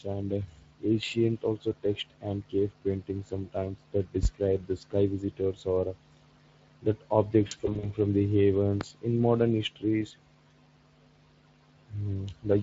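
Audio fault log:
throughout: Speex codec. The speech has a plainly audible hoarse, noisy grain, as the CELP coder has too few bits for the excitation to model the voice cleanly. The bit rate heard fits a setting around 20 kbps, and any band above 8 kHz is a shaped noise fill rather than real detail.
4.23 to 4.27 s and 8.81 to 8.85 s: loud pop. A single sharp pop sits on top of the speech each time, about 20 dB above the signal, between "cave paintings sometimes that" and "the sky visitors or" in the first case. The speech carries on underneath. Likely cause: a voltage step from a plug, switch or driver glitch.
7.47 to 7.91 s: VoIP packet loss concealed by the speech codec. About 140 ms of audio is missing, in short gaps of up to 40 ms spread over about 360 ms. The decoder fills each gap by extending the last pitch and filter at falling gain, giving brief buzzy or noisy, fading patches, and the speech stays weak or distorted just after each gap.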